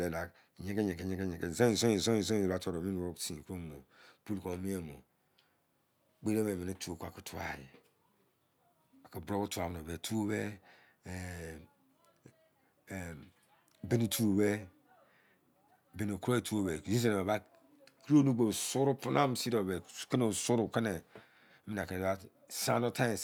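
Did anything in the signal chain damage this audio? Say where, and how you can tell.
No, nothing in the signal chain has left an audible mark on this speech recording. No stage, from capture through to playback, shows any sign of damage.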